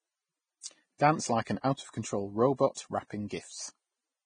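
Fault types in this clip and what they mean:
Vorbis compression: The whole clip has a heavily degraded, transform-coded sound, likely from Vorbis at a low rate that fits about 20 kbps. The codec models a smooth spectral envelope and quantises the detail above it coarsely, so the upper speech band turns into hissy, grainy noise instead of clean fricatives and harmonics. Nothing remains above 9.7 kHz, where the encoder has cut the band off, and voiced sounds take on a rough texture with softened onsets.
pre-echo: At 0.98 s a burst of hiss leads into an abrupt onset, spreading about 18 ms ahead of it. The transform encoder distributes its quantisation error across the whole analysis block. When a sharp attack sits late in that block, the noise level set by the loud portion leaks into the quiet moment before it. The result is a brief smear of noise in front of the attack, and the transient loses some of its crispness.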